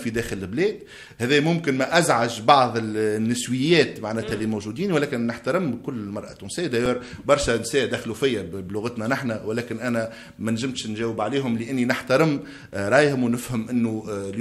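At 6.86 s the output buffer briefly ran dry, an underrun with held sample: the converter froze on its last value for about 2 ms, then resumed with a small stretch of live audio missing.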